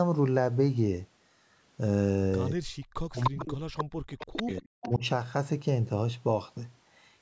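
From 2.54 to 5.03 s the speech is likely suppressed in double talk: with both ends talking at once, the echo canceller seems unable to tell the near talker from the loudspeaker echo and pulls everything down together. Across roughly two seconds of that stretch the speech dips, thins and breaks up in pieces, at its deepest falling by around 40 dB.

Inside the same stretch an echo leak likely occurs, where the loudspeaker side's canceller fails to remove all of its loudspeaker pickup and sends it back. A copy of the speech returns 300 ms late at 3.18 to 3.30 s, at about the same level as the speech. Fainter scraps follow at 3.77 to 3.84 s (about 5 dB down), 4.19 to 4.61 s (about 10 dB down) and 4.82 to 4.95 s (about 15 dB down). The call's band stops at 8 kHz.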